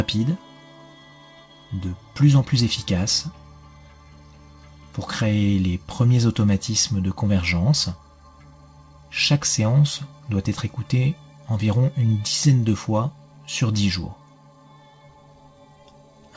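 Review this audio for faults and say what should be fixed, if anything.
No faults found; nothing needs fixing.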